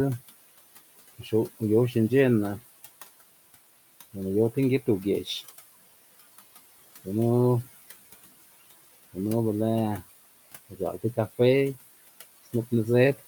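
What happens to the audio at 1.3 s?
Between 1.23 and 1.33 s the speech briefly sounds swallowed and faint, dipping by about 7 dB for roughly a tenth of a second. This is speech cut by the noise suppressor: it mistook that soft stretch of speech for background noise and turned it down along with the room noise.

Around the same moment, the background sinks in the gaps and rises under the speech. These are noise suppressor artifacts from frame-by-frame band attenuation that pulls the noise down by about 17 dB.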